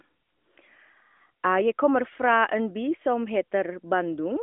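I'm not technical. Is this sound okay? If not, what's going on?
Yes, this sound is okay, and nothing is going wrong in it.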